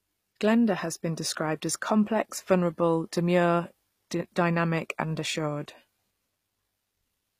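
HE-AAC compression damage runs throughout this speech clip and is plainly audible. The treble is likely rebuilt by spectral band replication from lower bands, so s sounds come out gritty and lispy. Nothing is present above 15.5 kHz, and the damage fits a low bitrate around 24 kbps.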